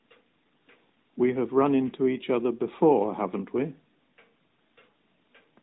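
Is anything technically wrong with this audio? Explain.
No, nothing is technically wrong with this audio.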